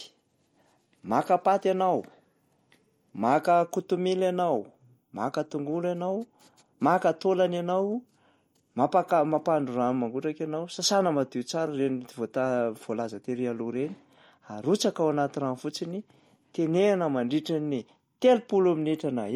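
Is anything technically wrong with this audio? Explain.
Yes. Throughout the speech, the damage points to MP3 compression, likely at a low bitrate around 48 kbps. Starved of bits, the encoder dropped frequency lines it judged unimportant and kept nothing above 19.3 kHz, so quiet spectral detail blinks in and out from frame to frame. The result is plainly audible: a watery, swirling texture, metallic chirps on s sounds, and softened, smeared consonant attacks.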